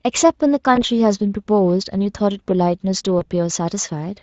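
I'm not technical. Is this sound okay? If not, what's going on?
No. Twice, at 0.75 to 0.83 s and 3.19 to 3.23 s, the speech briefly smears into a stretched, fading sound. This is VoIP packet loss concealed by the speech codec. A small piece of the call went missing, and the Speex decoder guessed the gap by stretching the last sound it had. Unlike a plain dropout, you hear this smeared fill instead of silence.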